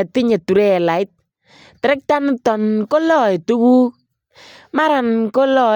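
No technical faults can be heard anywhere in the recording.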